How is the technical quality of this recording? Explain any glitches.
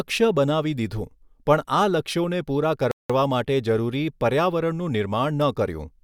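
The speech has one glitch, a rebuffering stall from 2.91 to 3.10 s. The sound drops to silence for 183 ms, then resumes exactly where it broke off, with nothing skipped. The player had exhausted its downloaded audio and waited for more, adding time rather than losing any.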